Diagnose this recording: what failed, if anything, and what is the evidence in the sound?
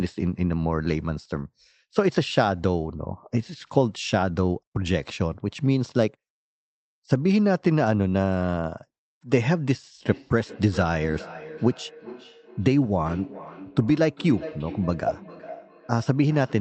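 The fault is feedback echo between two devices, at the call-processing stage. From 10.09 s to the end at 16.61 s, each stretch of speech returns about every 400 ms, at its loudest about 16 dB below the speech. A second device in the room played this call's audio, and the microphone picked it up again. The echo canceller removes only its own device's playback, so this copy passed through. A spectrogram shows lower-level copies of each syllable offset by about 0.4 s, inside the Opus band that stops near 8 kHz.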